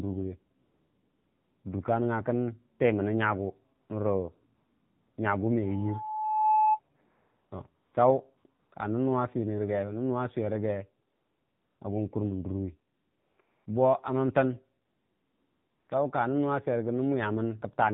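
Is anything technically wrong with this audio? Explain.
Yes, three things. The whole speech clip runs through the AMR narrowband mobile codec at 7.4 kbps: nothing above 4 kHz survives, and the low bitrate makes it sound plainly buzzy and synthetic.

AMR comfort noise cuts in eleven times between 0.64 and 15.88 s, for 60 ms up to about a second. The phone judged those gaps silent and stopped sending speech, so smooth synthetic hiss switches in.

At 5.62 to 6.80 s there's a loudspeaker feedback squeal, an 863 Hz tone that swells over roughly a second to sit a few dB above the speech as the mic-speaker loop runs away.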